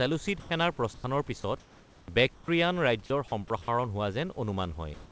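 At 0.40 to 0.50 s and again at 0.94 to 1.04 s, the sender's voice detector likely judged the sound to be background and stopped sending, so the receiver played comfort noise instead. This is sound dropped by the voice detector: each 100 ms stretch turns into flat, steady noise, cutting off about 60 ms and then about 40 ms of speech before the sound returns.

From 1.60 to 2.08 s, in a real pause, the sender likely switched to discontinuous transmission, and the receiver filled the gap with comfort noise in place of the background. The room's own detail, about 28 dB below the loud parts, gives way to a smooth synthetic hiss about 1 dB quieter. The same thing happens from 2.34 to 2.48 s, where the fill is about 4 dB quieter than the background.

At 3.06 to 3.10 s the voice detector likely cut out again, replacing 40 ms with noise and losing about 20 ms of speech. At 3.62 to 3.68 s a 60 ms gap likely comes from the same cause and removes about 50 ms. 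Each time the sound jumps briefly to steady noise.

From 4.94 s to the end, comfort noise likely replaces the background once more, standing in for a background about 27 dB below the loud parts and coming out about 2 dB louder and without texture.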